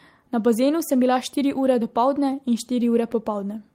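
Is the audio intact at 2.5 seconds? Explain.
Yes, the speech at 2.5 seconds plays through intact, with no dropout, click, distortion or other fault at that moment.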